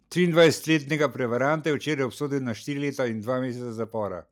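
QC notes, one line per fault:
0.40–0.47 s, microphone overload: the loudest peaks here are flattened, with a harsh, crackling edge riding on top of the sound. The input level was likely set too high, so the waveform pushed about 3 dB past what the converter can represent and a small fraction of samples, around 3 percent, had their tops sheared off. Unlike codec or loudspeaker distortion, the grit appears only on these peaks and vanishes as the level falls.
1.02 s, microphone volume stepped down: the voice and the background drop together by about 4 dB in one abrupt step, with no ramp. This is likely the call software reacting to the overloaded peak just before by lowering the device's input volume. A compressor or automatic gain control would duck and then recover over time. Here the new, lower level simply stays, and the background noise falls along with the voice.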